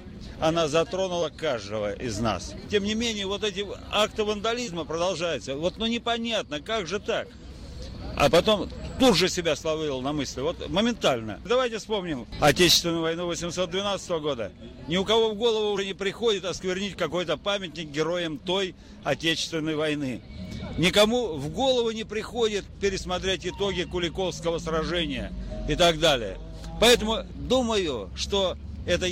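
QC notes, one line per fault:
1.21 s, 4.67 s and 15.77 s: compressed frames skipped. The audio jumps ahead about 20 ms twice, then about 70 ms, which points to one and then roughly three lost or rejected frames.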